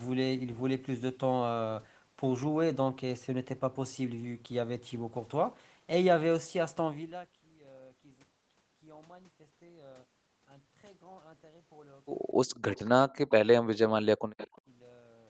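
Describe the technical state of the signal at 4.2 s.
At 4.2 s the speech is intact, carried through the call path with its usual wideband character, nothing above 8 kHz, and no fault present at that moment.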